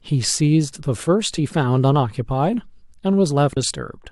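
At 1.37 s and again at 3.55 s, damaged data in a compressed stream throws the decoder off: it misreads the corrupted frames, loses sync and hunts for the next valid header. Each time the speech is broken by a brief glitch.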